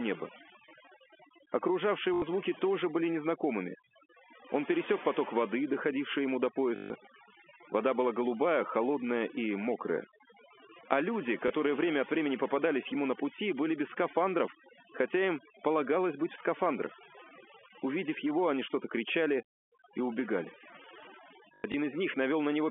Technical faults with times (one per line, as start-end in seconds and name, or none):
0.00-22.70 overdone noise removal
2.14-2.22 packet loss with last packet repeated
6.76-6.90 packet loss with last packet repeated
11.48 packet loss with last packet repeated
21.54-21.74 packet loss with last packet repeated